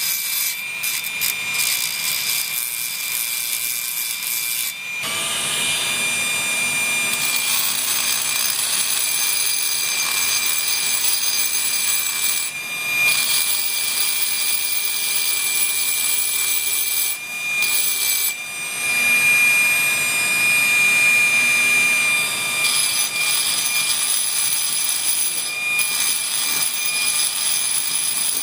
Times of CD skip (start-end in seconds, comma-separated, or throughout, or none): none